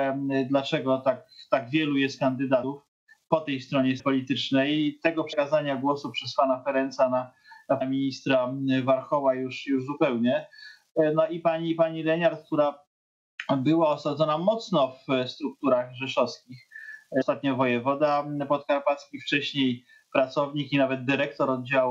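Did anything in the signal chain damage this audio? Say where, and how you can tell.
Yes, the damage is at the codec or storage stage: compressed frames were skipped at 2.63, 3.99, 5.32, 7.80 and 17.20 to 17.22 s. At each point the audio jumps forward rather than pausing, losing roughly 70, 300, 100, 200 and 200 ms. Those gaps are whole multiples of a 26.1 ms frame, which points to missing or rejected frames. Unlike a buffer dropout, there is no silent gap.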